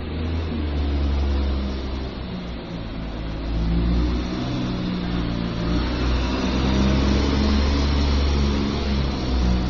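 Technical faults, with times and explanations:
Throughout, transcoding between lossy codecs: nothing is heard above about 6.8 kHz, and smeared, swirly artefacts sit on top of one another. This fits a low-rate MP3 pass likely followed by Opus encoding. The second codec spends bits on the first's damage.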